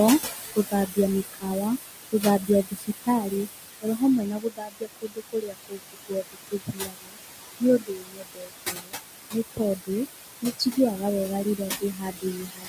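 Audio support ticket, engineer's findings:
Noise suppressor artifacts, throughout. Room noise sitting only about 6 dB under the speech is pulled down by about 19 dB in the gaps and lifted back under the speech each frame.

Speech cut by the noise suppressor, 0.2–1.64 s, 2.12–3.48 s, 3.82–7.18 s, 7.6–8.95 s, 9.32–9.9 s, 10.42–12.68 s. Suppressor mistakes quiet speech for noise and drops it by about 20–22 dB. Soft consonants and word endings are swallowed, worst across 3.82–7.18 s.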